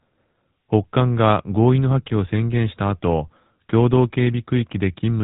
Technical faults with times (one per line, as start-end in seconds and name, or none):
0.00-5.23 GSM full-rate codec